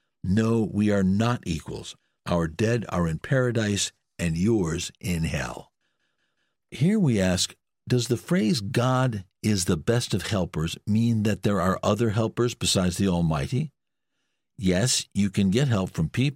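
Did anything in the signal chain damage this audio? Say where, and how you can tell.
No, nothing in the signal chain has damaged this speech recording. No stage, from the wiring and converter through to storage and playback, leaves any audible mark on it.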